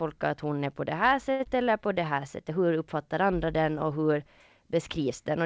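Right after "är på det här", from 1.32 to 1.41 s, there is a short stall from a late packet. A packet arrived late and the jitter buffer ran dry. The receiver held the last sound for about 75 ms, then carried on from the same point. Nothing is lost. The sound just hangs briefly, with a slight buzz or dip.

At 1.43 to 1.47 s comes a short concealed packet loss. About 60 ms of audio never reached the decoder in time. Only about 18 ms was filled in, so the buffer delay drops by roughly 40 ms. It sounds like a quick smear.

From 1.70 to 2.14 s there is a jitter buffer slow-down. The receiver stretched the audio by 45 ms to rebuild its reserve. It repeated small pitch-sized pieces to do this. Playback runs at about 91% speed with the pitch unchanged. Sounds are drawn out slightly. The whole clip also lacks content above 8 kHz, which fits a wideband call codec such as G.722.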